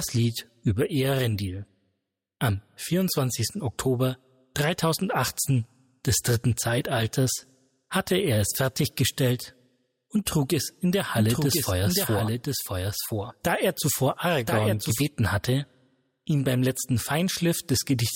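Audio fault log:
11.2 to 15.0 s, doubled audio track: for these few seconds a second full-band copy of the sound runs along about a second behind the original, only a few dB down. It's dry, with no tail or room colour of its own, and it cuts in and out abruptly at both ends. That clean, fixed lag points to a likely second capture of the same signal through a slower path, or two out-of-step copies left in an edit.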